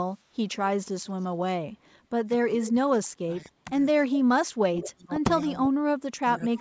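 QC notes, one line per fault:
1.05–1.27, 1.85–1.98, 2.62–2.71 and 4.14–4.18 s, echo leak: a delayed copy of the talk trails in about 215 ms behind, barely there (about 40 dB down) in the first two spots, then stronger at about 20 and 15 dB down. The likely cause is a speakerphone whose echo canceller let its pickup slip back.
2.39–3.71 and 3.99–5.15 s, speech suppressed in double talk: the talker dips in pieces, roughly a second in total each time, sagging by about 20 dB and then about 30 dB at worst. This is likely the canceller ducking its own talker along with the echo while both sides talked at once.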